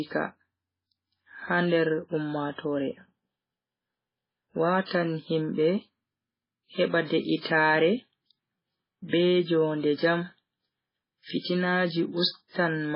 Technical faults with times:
0.00-12.95 MP3 compression
4.86-4.91 pre-echo
11.39-11.45 pre-echo

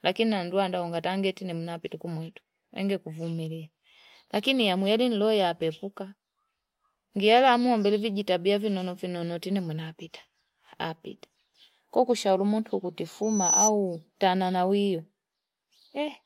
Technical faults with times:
13.22-13.71 loudspeaker feedback squeal

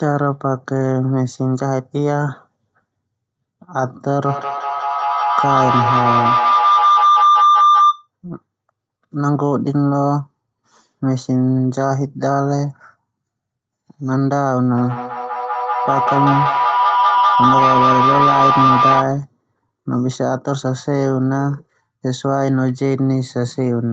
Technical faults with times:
4.06-8.08 feedback howl
14.78-19.18 feedback howl

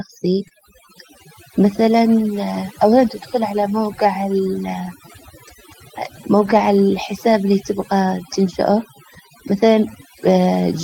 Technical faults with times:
0.00-10.84 overdone noise removal
6.45-6.63 lost packet rebuilt from error correction

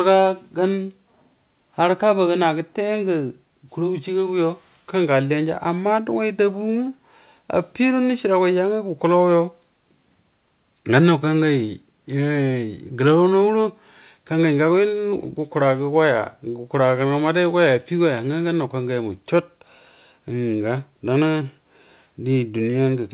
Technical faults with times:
none

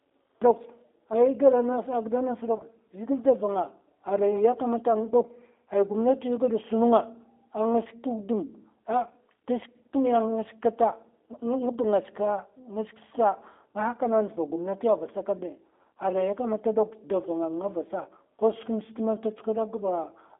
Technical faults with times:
0.00-20.39 G.729 codec
2.57-2.65 VoIP packet loss concealed by the speech codec

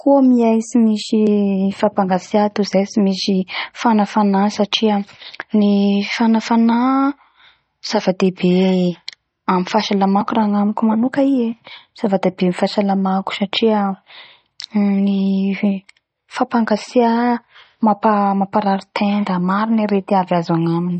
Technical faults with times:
0.00-21.00 MP3 compression

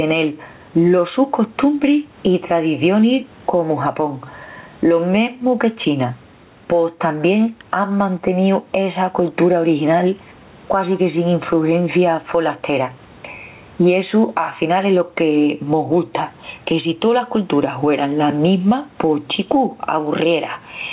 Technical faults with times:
0.00-20.93 gain pumping

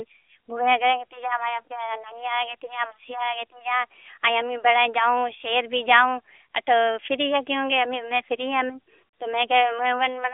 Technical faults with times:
none

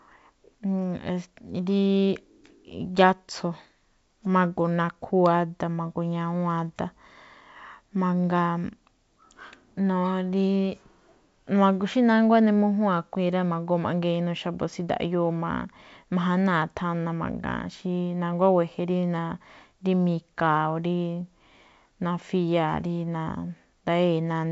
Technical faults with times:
none

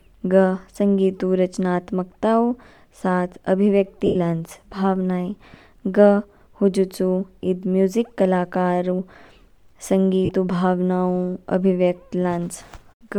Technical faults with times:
4.06-4.16 lost LE Audio frames
10.25-10.29 lost LE Audio frames

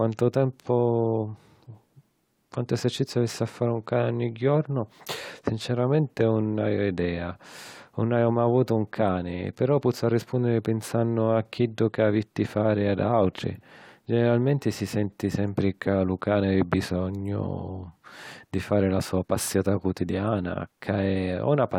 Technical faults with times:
none

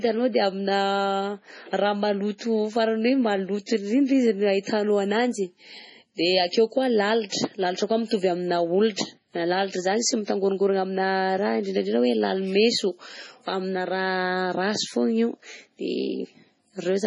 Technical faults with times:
0.00-17.06 MP3 compression
2.38-2.41 pre-echo
7.29-7.32 pre-echo

